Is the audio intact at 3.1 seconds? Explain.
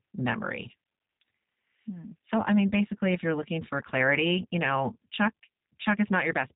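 No. At 3.1 seconds, as throughout the clip, the speech sounds dull, rough and synthetic, with nothing above 3.8 kHz. This is plainly audible G.729 codec damage: speech resynthesised from a vocal tract filter, pitch predictor and sparse pulses, which fits an 8 kbit/s link.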